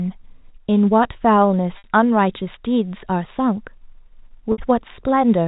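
Speech over G.711 telephone coding shows packet loss with pitch repetition at 1.78–1.84 s and 4.52–4.58 s, each about 60 ms. The last pitch period repeats as a brief buzzy hold that fades out, which fits three lost 20 ms packets.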